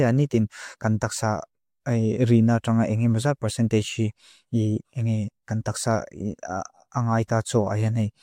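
Nothing stood out as a technical problem anywhere in this speech recording on listening.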